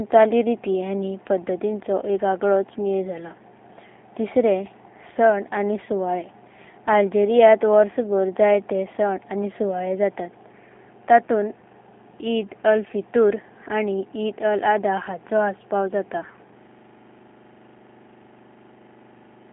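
G.729 codec coding runs through the whole clip, from start to finish. The speech is rebuilt from a vocal tract filter, a pitch estimate and a few pulses per half-frame, so it comes out plainly rough and slightly synthetic, which fits an 8 kbit/s G.729A stream. The line band spans roughly 200 Hz to 3.6 kHz, and nothing above 3.8 kHz survives, leaving the speech muffled and without its crisp consonant detail.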